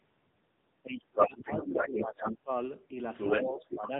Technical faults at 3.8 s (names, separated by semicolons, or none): AMR narrowband mobile codec; speech suppressed in double talk